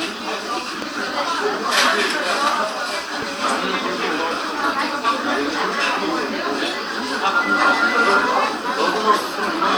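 A sudden voltage pulse, likely from static or a switch, entered the signal twice, giving a loud pop at 0.82–0.85 s and 3.22–3.25 s, roughly 10 dB above the sound.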